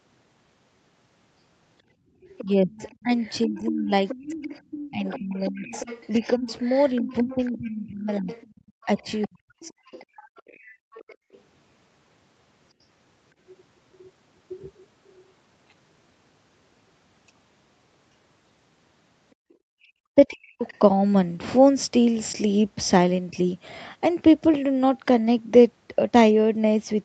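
At 1.95 to 2.15 s the room background drops by about 18 dB and then returns: background gated by the echo canceller. The canceller pulled the microphone down while the loudspeaker played. This differs from a dropout or packet loss because only the quiet room tone vanishes, briefly and cleanly, and there is no glitch or repeated fragment. The same gating recurs in short bursts totalling under half a second between 8.61 and 11.32 s, reaching about 40 dB, and again at 19.35 to 19.55 s at about 33 dB.

From 2.38 to 11.4 s a second, fainter voice sits about 15 dB under the main speech. It is the other side's voice leaking through, likely because the echo canceller left some of the loudspeaker signal in the microphone. A similar leak appears at 19.51 to 20.79 s, about 25 dB down. Unlike reverb, it is a separate talker rather than a smeared copy of the main voice.

Over the same stretch, 2.43 to 10.41 s, the main talker dips in pieces adding up to about three seconds, sometimes by around 30 dB. 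This is speech suppressed in double talk, likely caused by the canceller treating both voices as echo. It happens again between 19.83 and 23.36 s, with drops near 40 dB over well under a second. Unlike gating, it takes away the wanted voice itself, not just the background. Throughout the clip, nothing is heard above 8 kHz, which fits the Opus call path's bandwidth.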